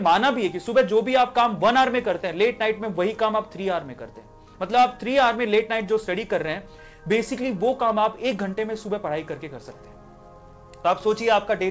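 No technical faults can be heard; the audio carries the character of a wideband call path, with nothing above 8 kHz, which fits the G.722 codec at 64 kbps.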